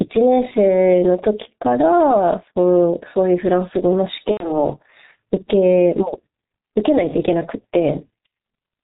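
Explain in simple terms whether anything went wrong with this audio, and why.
Several things went wrong. The microphone level was likely set far too high, so an automatic level control kept pulling the volume down whenever the talker got loud and letting it spring back up in the pauses. The result is gain pumping throughout. Loud and quiet moments end up closer together in level, so the speech sounds squashed.

The speech was also squeezed through the G.723.1 codec, an old internet-phone format that packs the voice into a very small amount of data. It throws away everything above 4 kHz and only slowly updates its picture of the voice. That damage is heavy here and runs through the whole clip: the speech sounds muffled and hoarse, and consonants come out blurred rather than crisp.

From 4.31 to 4.51 s there is VoIP packet loss concealed by the speech codec. A short burst of the voice data, a little under a tenth of a second, never arrived, so the decoder guessed by stretching the last sound it had and fading it out. 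You hear a brief stretched, fading sound in place of real speech. Because each moment builds on the one before, the voice stays weak or distorted for a moment after the data returns.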